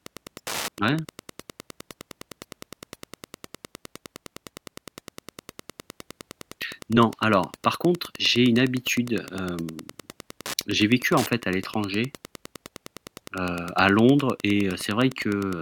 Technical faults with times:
0.00-15.62 Wi-Fi interference

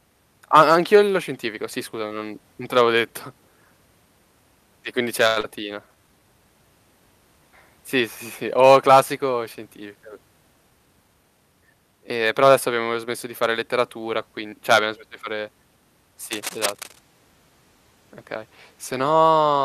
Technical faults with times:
5.27-5.38 short stall from a late packet
5.40-5.45 skip ahead
5.88-6.20 jitter buffer slow-down
16.31-17.00 cable scratch noise

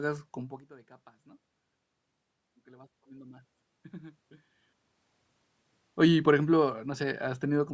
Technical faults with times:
2.64-4.27 automatic gain rising

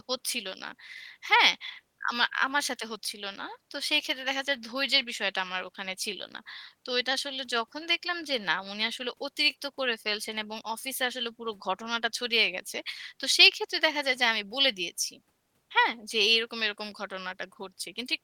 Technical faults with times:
none

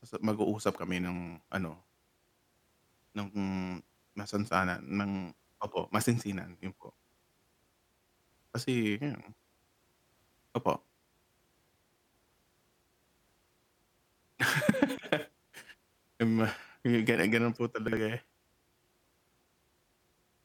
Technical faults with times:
14.21-14.35 chunks out of order
17.88-17.97 chunks out of order

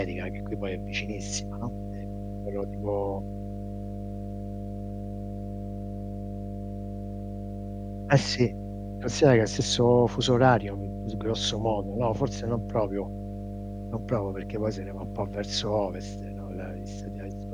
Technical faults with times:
0.00-17.54 mains hum

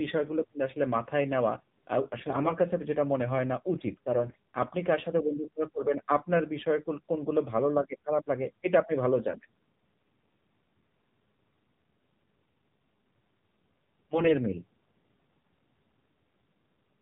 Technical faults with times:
0.00-17.02 AMR narrowband mobile codec
2.28-2.53 AMR bit errors
4.24-4.36 AMR bit errors
9.30-9.46 AMR bit errors
14.14-14.32 AMR bit errors

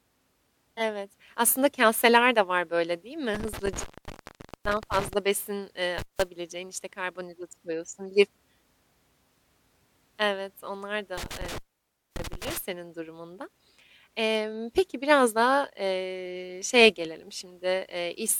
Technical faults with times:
0.72-0.82 compressed frames skipped
3.35-5.13 intermittent contact
5.98-6.22 intermittent contact
11.17-12.58 intermittent contact

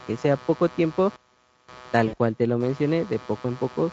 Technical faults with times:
0.00-3.92 computer activity noise
2.07-2.16 VoIP packet loss concealed by the speech codec

